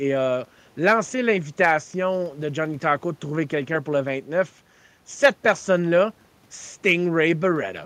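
Nothing in the speech stood out as a technical problem on listening.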